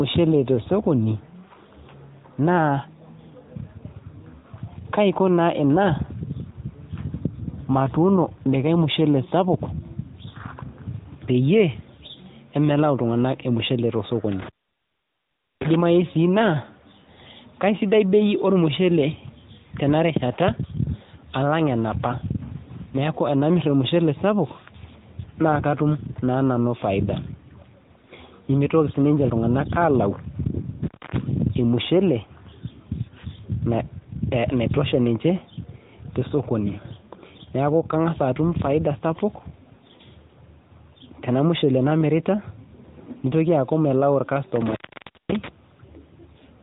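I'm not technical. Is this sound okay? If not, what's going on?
No. The speech has gone through the AMR narrowband mobile codec, the kind used for 2G and 3G phone calls, all the way through. Nothing above about 3.8 kHz survives, so the voice sounds boxed-in and dull. The codec also rebuilds the voice from a simplified model of the throat and mouth. That gives it a plainly buzzy, slightly artificial edge. A plain treble cut would only sound muffled, so that added synthetic buzz is what marks this as a phone codec.

There are also three moments of intermittent contact, like a loose plug or cable briefly losing connection. The sound cuts out from 14.32 to 15.75 s for just over a second, from 30.84 to 31.17 s for about a quarter second, and from 44.56 to 45.48 s for about half a second. Each cut has crackle where it starts and stops. What sets this apart from a simple network dropout is that crackle, and the faint hiss left behind instead of clean silence.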